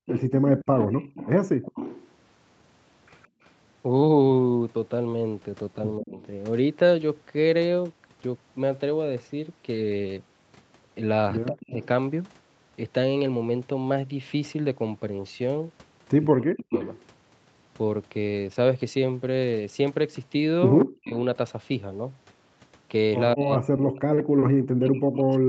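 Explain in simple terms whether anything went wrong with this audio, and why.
Several things went wrong, all tied to the echo canceller, the part of a call system that stops a loudspeaker's sound from being sent back through the microphone.

Background gated by the echo canceller: between 0.0 and 3.41 s, the quiet room sound behind the talker keeps dipping almost to silence and coming back, adding up to roughly 0.4 s of gaps. Unlike a dropout in the connection, only the background vanishes, and it returns as soon as the canceller relaxes its grip on the microphone.

Echo leak: a second, delayed copy of the talking trails the original by about 165 ms. It runs from 0.06 to 6.27 s, appears faintly from 11.6 to 11.87 s, and is loud from 16.25 to 17.03 s and from 20.79 s to the end. The likely cause is a loudspeaker on the far end whose canceller let part of its own playback slip back into the call. 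A room's natural reverberation blurs smoothly, but this copy sits at one fixed delay.

Speech suppressed in double talk: at 6.01 to 6.2 s, 11.47 to 11.76 s and 16.29 to 16.74 s, the voice briefly sinks or cuts out, and from 20.92 s to the end it keeps fading in pieces. Each time, both sides were speaking at once. The canceller likely couldn't tell the talker from the echo and turned everything down. Gating removes only the background, whereas here the voice itself disappears.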